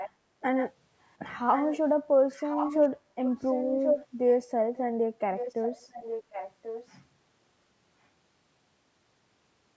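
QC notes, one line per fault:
0.0–6.97 s, echo leak: a copy of the speech returns about 1.09 s late at 0.0–0.1, 0.4–0.72, 1.05–1.14, 1.54–1.78, 2.32–2.88, 3.24–4.07 and 5.36–6.97 s. It is roughly 5–40 dB down, strongest at 3.24–4.07 s and barely audible at 1.05 s. The likely cause is a loudspeaker pickup that the echo canceller failed to remove.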